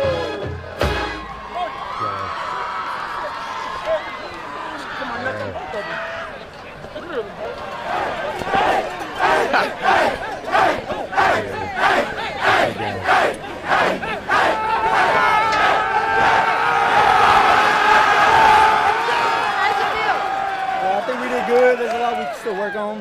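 No technical faults can be heard anywhere here.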